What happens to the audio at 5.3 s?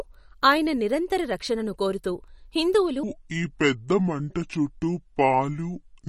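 A section at the wrong speed runs from 3.03 s, just after "నిరంతర రక్షణను కోరుతూ హిందువులు", to the end at 6.09 s, so it covers 5.3 s. The speech plays at about 0.66 times its recorded speed, likely from a wrong playback clock, so it sounds slow and deep, roughly seven semitones low.

MP3 compression is also present here, as it is throughout. Weak frequency detail flickers in a watery, swirly way. This plainly audible damage fits a low bitrate of about 49 kbps and likely comes from MP3 encoding.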